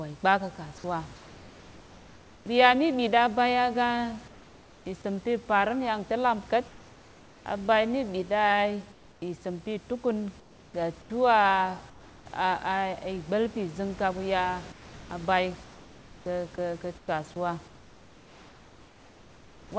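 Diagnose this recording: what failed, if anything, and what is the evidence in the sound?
Comfort noise in place of the background, likely from call-processing discontinuous transmission: pauses at 1.16–2.46, 4.28–4.86, 6.68–7.46, 8.92–9.22, 10.40–11.10, 11.90–12.26 and after "pizing kaɓuya" from 14.72 s switch to smooth, featureless, slightly quieter noise (about 3 dB down, about 6 dB at 8.92 s). On a spectrogram these gaps look like uniform grey blocks without the room's texture.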